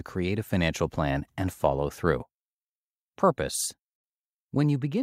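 The speech recording has no audible technical fault, and its signal stays continuous and steady throughout.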